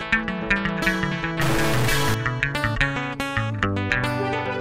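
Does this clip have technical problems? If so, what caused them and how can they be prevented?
Yes. From 1.41 to 2.14 s the sound turns harsh and buzzy. A stuck bit is the likely cause, offsetting samples by about -20 dBFS. Testing converters and data lines prevents it.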